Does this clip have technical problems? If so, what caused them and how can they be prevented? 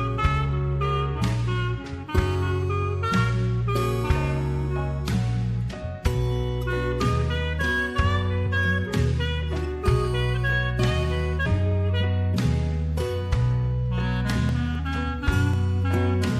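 Yes. Two brief blips at 8.45 s and 11.45 s come from damaged data in a compressed stream: corrupted bytes made the decoder misread frames, lose sync and skip to the next frame header. Prevention: deliver the stream over a checksummed, error-checked transport and verify file integrity.

Between 14.49 s and 15.54 s there are five CD scratch ticks, each lasting only a few milliseconds. A disc scratch exceeded the error correction on each revolution, so the player interpolated or muted the lost samples. Prevention: rip from clean discs using secure, verified extraction.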